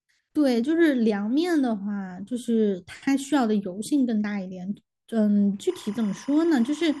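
Timecode bleed runs from 5.69 s to the end of this speech clip at 7.0 s: a steady chirping warble sits roughly 25 dB below the speech. Linear timecode from a neighbouring track or cable is leaking into the audio path. Its square-wave signal flips between tones around 1 and 2 kHz as the bits change, and its repeating rhythm fits 25-frame code.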